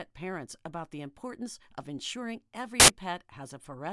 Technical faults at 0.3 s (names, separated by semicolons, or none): none